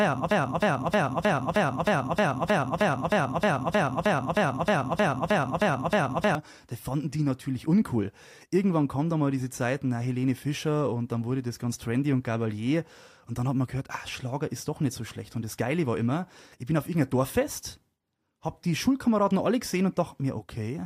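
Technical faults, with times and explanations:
0.00–6.35 s, broken-record loop: already under way at the start, one 0.31 s speech fragment repeats 19 times back to back, identical each pass, likely from a stalled stream resending its last fragment, so the intended speech is lost. Unlike echo, nothing decays or overlaps.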